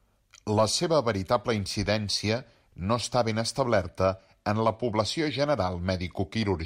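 From 2.85 s, right after "seva veritable incidència", to 6.66 s, crude rate conversion appears. The rise from 44.1 kHz to 48 kHz likely used plain linear interpolation without filtering, leaving inharmonic fizz roughly 40 dB under the speech that tracks its louder, brighter parts.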